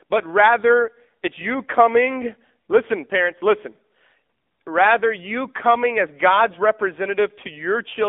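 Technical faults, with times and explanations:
Throughout, AMR narrowband mobile codec: the speech is confined to a line band of about 250 Hz to 3.6 kHz, and the codec damage is plainly audible as a buzzy, synthetic edge on the voice. That texture comes from the codec rebuilding the voice from a vocal-tract model fed by sparse pulses in 20 ms frames, and its coarseness points to a low mode near 7.4 kbps. Plain telephone band-limiting would only muffle the sound without adding this artificial buzz.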